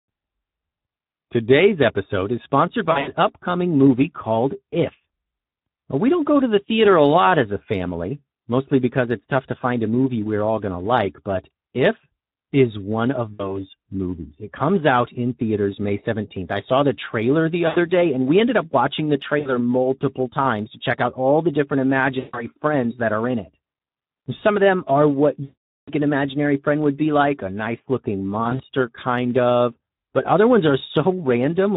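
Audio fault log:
Throughout: Speex codec. The speech carries a plainly audible hoarse, noisy grain. This CELP coder has too few bits to model the excitation finely, which fits a setting around 11 kbps, so the voicing comes out rough and buzzy.
2.91–3.11, 13.33–13.59, 17.67–17.78, 19.39–19.55, 22.19–22.47, 25.43–25.93, 28.43–28.62 s: VoIP packet loss concealed by the speech codec. Gaps of 60 to 440 ms, the longest near 25.4 s, are filled by extrapolating the last pitch and filter with falling gain. The result is a smeared buzz or fading coloured noise, with weak, distorted speech lingering briefly after each gap.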